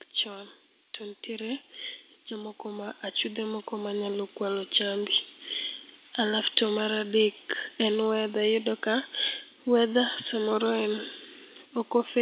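Automatic gain rising affects this speech from 0.23 to 1.7 s and again from 2.28 to 4.77 s. In each stretch the level control judged the input too quiet and turned its gain up step by step, so the voice and the background noise swell together rather than the voice alone growing louder: by about 4 dB in the first rise and about 8 dB in the longer second one. The sound stays band-limited to 4 kHz throughout, as the call codec passes nothing higher.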